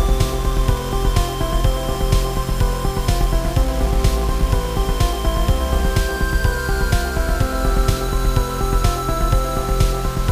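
Throughout, the sound carries grainy distortion that tracks the signal: low bit depth without dither, likely rounding to around 5 bits, with the error only about 20 dB down. The waveform shows coarse stair-steps, and a spectrogram shows broadband hash that rises and falls with level.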